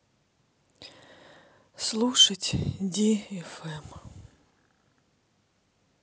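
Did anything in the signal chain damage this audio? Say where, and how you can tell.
No damage from any stage.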